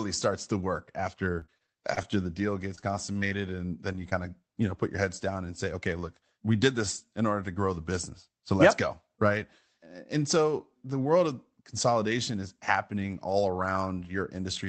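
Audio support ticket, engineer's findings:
Repeated packet loss (robotic sound), 1.39–2.06 s and 2.75–3.33 s: choppy speech from a run of short gaps, the longest about 24 ms and 31 ms, each patched by extending the previous sound. About 17% and 20% of the spans are synthesized. Probable component: network and jitter buffer feeding the Opus decoder's concealment.

Short concealed packet loss, 3.93–3.96 s and 4.10–4.13 s: brief smear or wobble where about 20 ms of audio never arrived in time. The decoder bridged each hole from the preceding signal, then crossfaded back. Probable component: late or dropped packet on the call path. The upper band is limited to 8 kHz.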